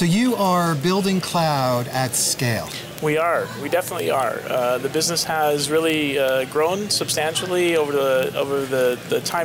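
A receiver clock, unlocked and off by roughly 500 ppm, slips one sample about every 40 ms from 0.11 to 9.44 s: steady word clock ticks.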